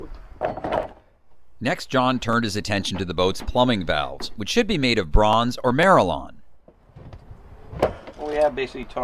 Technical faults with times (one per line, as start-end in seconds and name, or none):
none